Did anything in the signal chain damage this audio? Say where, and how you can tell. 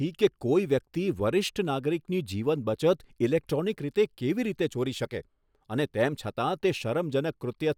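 No, nothing in the signal chain damaged this speech recording. No stage from capture through to playback left any audible mark.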